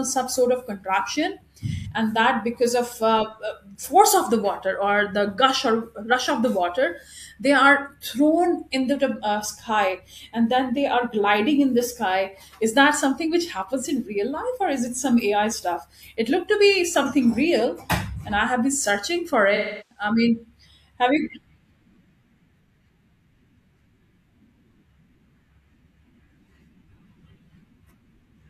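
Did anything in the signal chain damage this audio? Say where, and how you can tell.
Yes, it's AAC frame loss with concealment at the codec stage. There are smeared, phasey patches at 1.76 to 1.87 s, after "some sort of contraption", then 19.55 to 20.04 s, after "been searching for", and 22.64 to 22.67 s. The decoder is rebuilding missing frames from the last good spectrum.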